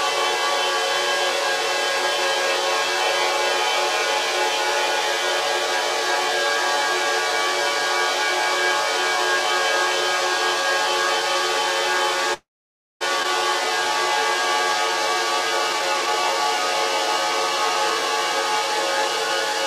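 From 12.33 to 13.03 s a call audio freeze stretches the last sound into a brief fading buzz, then about 0.57 s of silence, likely from packets stalling and the jitter buffer running dry. At 13.23–13.26 s playback skips ahead, abruptly dropping roughly 0.4 s of the everyday sound with a near-seamless splice. From 15.74 to 19.54 s a jitter buffer speed-up trims short pitch-period segments, running the audio about 4% faster at unchanged pitch and shedding around 0.2 s.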